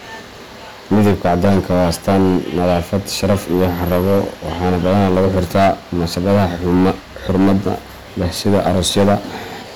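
From start to finish the speech is marred by hard clipping: the signal reaches a stage driven about 14 dB beyond what it can pass, so every peak is sliced flat. Only a small share of samples, several percent, sits against the limit, but those flat tops spray harmonics high into the spectrum, giving loud syllables a harsh, buzzy fuzz. A waveform view shows squared-off plateaus on both positive and negative peaks; a spectrogram shows broadband smears reaching upward on each stressed sound.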